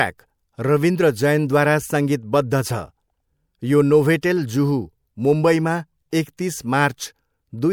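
At 4.21 s and again at 6.37 s, the speech shows pre-echo: a brief hiss runs just ahead of a sharp onset, about 19 ms and 15 ms long. The codec's quantisation noise, sized for the loud attack, smears back across the quiet moment before it within the same block, so each attack sounds softened. Unlike reverb or a true echo, which trail after a sound, this noise arrives before the attack.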